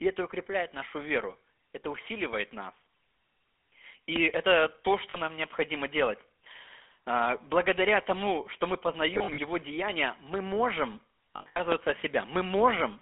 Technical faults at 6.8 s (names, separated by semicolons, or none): GSM full-rate codec